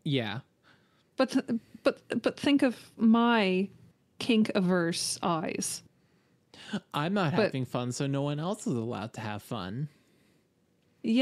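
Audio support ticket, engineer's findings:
Listened to the speech recording and found nothing here to chase, so no action needed on this one.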